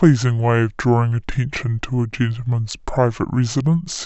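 From the first moment to the end, the speech drags low and slow, a wrong sample rate problem. It's running at about 0.69 times normal speed and roughly 6.5 semitones flat, which fits 32 kHz audio played back at 22 kHz with no conversion.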